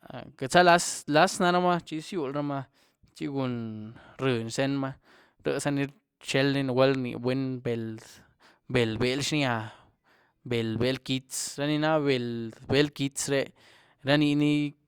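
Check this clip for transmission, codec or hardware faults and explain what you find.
Nothing here needs flagging; the speech just rolls along with no faults to report.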